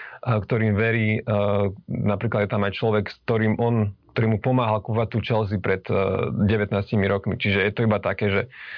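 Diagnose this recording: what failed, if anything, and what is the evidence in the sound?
Nothing stood out on listening to the recording, and no stage of the chain gave any audible sign of failure.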